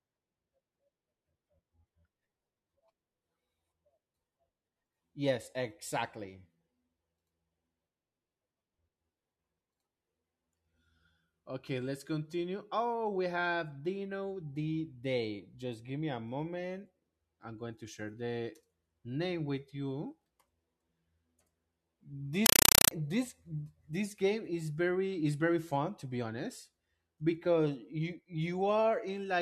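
A compressed stream played as audio from 22.46 to 22.91 s: an AC-3 stream reaches the output undecoded and is treated as ordinary samples. Bursts of 5.33 ms, repeating 31.25 times a second, become very loud, chattering static, which stops just before "this this game is".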